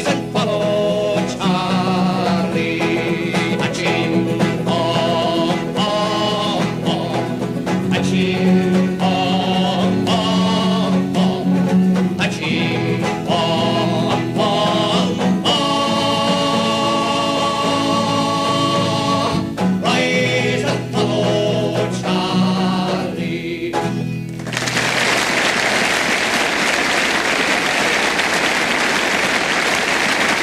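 Nothing here stands out as a technical fault; the audio just runs along steadily without any glitches worth pointing to.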